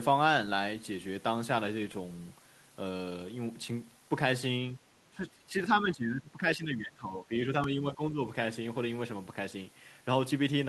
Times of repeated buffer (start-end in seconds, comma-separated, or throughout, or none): 1.92, 7.64